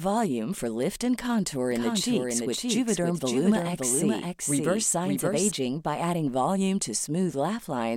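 A speech recording with a doubled audio track from 1.72 to 5.52 s, after "lift and contour" and before "by adding volume to". A dry copy trails about half a second behind, roughly 5 dB quieter. It starts and stops abruptly. Likely cause: a second, slower capture path.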